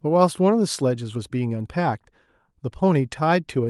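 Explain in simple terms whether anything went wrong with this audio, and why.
Nothing went wrong; the speech came through as expected.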